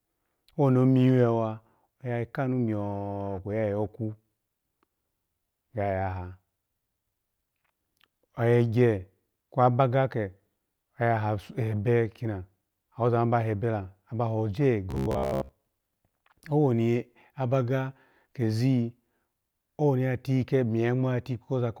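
From 14.91 to 15.52 s the speech turns into robotic sound from repeated short buffers: a hard, metallic buzz at 66.7 Hz that still loosely tracks the syllables. The likely cause is audio arriving too slowly, so a 15 ms chunk is replayed in place of the missing material for most of that stretch. A spectrogram shows rigid, evenly spaced harmonics of 66.7 Hz, and the waveform shows one identical 15 ms cycle repeating.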